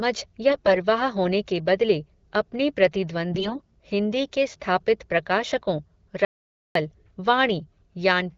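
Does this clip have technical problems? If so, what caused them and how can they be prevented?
Yes. AMR bit errors at 0.50 to 0.74 s and 3.32 to 3.76 s make the speech briefly hoarse and gargly. Around one bit in ten in the weakly protected parts of the frames arrived flipped, so the excitation pulses and the fine gain and spectral values decode wrongly. On a spectrogram, the harmonics smear into noisy, ragged bands while the level stays roughly steady. Prevention: a stronger radio link or better channel coding and error concealment would keep these frames clean.

An audio dropout to silence from 6.25 to 6.75 s cuts the sound out for about half a second. The waveform shows a flat line of silence, and the spectrogram shows a blank gap with no room tone. The likely cause is a momentary loss of input, such as a disconnected device or a failed link, while writing continued. Prevention: secure the connections and monitor the input.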